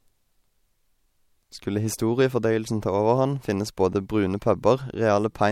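Nothing in the recording stood out as a technical problem on listening.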